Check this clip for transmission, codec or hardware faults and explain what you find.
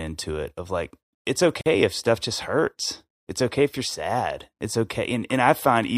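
There is one fault, a gap at a join of encoded pieces. From 1.61 to 1.66 s the speech stops for about 47 ms, right after "it of like it's". It resumes with "if stuff just hurts", exactly where it left off. The audio was encoded in separate pieces and joined without trimming. The encoder's start-up delay and last-frame padding were left in as silence. The edges are smeared by the codec.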